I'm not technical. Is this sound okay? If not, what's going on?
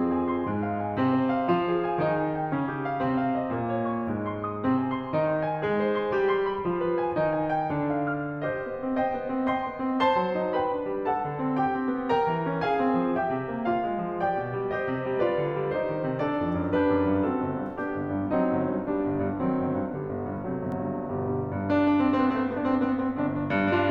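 No. Near the end, a doubled audio track appears: a second copy of the music was likely captured by a slower path. From 20.72 s until the end, a quieter copy trails the music by roughly 0.15 seconds, starting abruptly.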